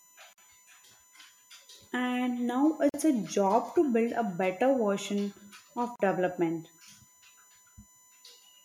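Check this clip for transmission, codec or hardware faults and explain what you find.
Two faults are present in this speech clip: a steady USB whine and three short gaps at joins between encoded pieces.

The USB whine runs throughout. It is a fixed-pitch tone on a 1 kHz series, strongest at its 7 kHz multiple. It sits about 35 dB below the speech. Current drawn in 1 ms bus frames leaks into the audio through power or ground.

The gaps at joins of encoded pieces fall at 0.33 to 0.38 s (49 ms), 2.89 to 2.94 s (46 ms, just before "a job to build"), and 5.96 to 6.00 s (40 ms, just after "a better version of"). Separately encoded segments were butted together untrimmed. Encoder start-up delay and end padding leave silence in the middle of the speech. Each gap opens with smeared edges, then the speech resumes where it stopped.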